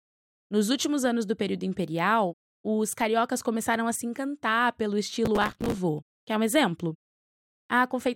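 Speech recording with a burst of processor overload crackle from 5.25 to 5.78 s. The processor misses its deadline again and again on dozens of short buffers, roughly 5 ms each. Every miss replays a scrap of old audio with abrupt edges, producing gritty tearing over the speech until the load clears.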